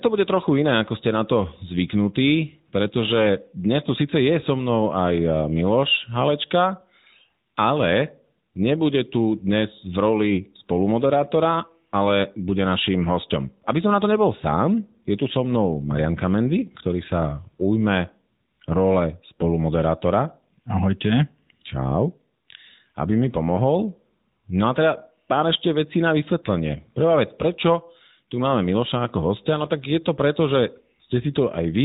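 From start to finish the speech carries the sound of the AMR narrowband mobile codec. Everything above 4 kHz is gone, and the voice has a plainly audible buzzy, synthetic edge because it is rebuilt from a vocal-tract model driven by sparse pulses rather than from the waveform itself. The degree of damage fits a mid-rate mode of roughly 10 kbps. A simple low-pass filter would dull the top end but leave the voice natural, so it is this artificial rasp that sets the fault apart.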